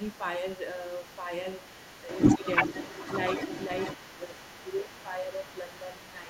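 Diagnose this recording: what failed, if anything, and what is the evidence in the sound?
Call processing failed at the echo canceller, most likely because it left part of the far-end loudspeaker signal in the microphone path. The other side's voice leaking through is faint from 0.00 to 0.23 s, then returns at 0.48 s nearly as loud as the talker and stays to the end.

Speech suppressed in double talk points to the same stage, with the echo canceller likely unable to separate its own talker from the echo and turning both down. The talker's level dips by roughly 5 dB at 1.18–1.31, 2.38–2.42 and 4.07–4.37 s, then by roughly 10 dB from 4.63 s onward.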